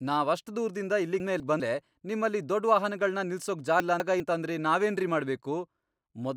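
Chunks out of order at 1.2 to 1.6 s, after "ನಾವಷ್ಟ್ ದೂರ್ದಿಂದ", and 3.8 to 4.2 s, before "ಅಂತಂದ್ರೆ ನಾವೇನ್ರಿ": a 200 ms chunk plays one chunk late, so the speech jumbles.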